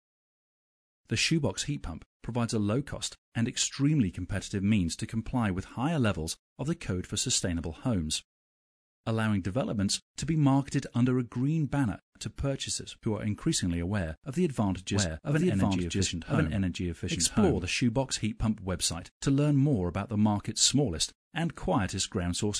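From 14.94 to 17.64 s a doubled audio track appears: a second full-band copy trails about a second behind at roughly equal loudness, likely from a slower capture path. Unlike an echo, it has no decay or room colour, and it starts and stops abruptly.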